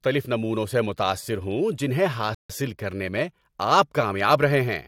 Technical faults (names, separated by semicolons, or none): rebuffering stall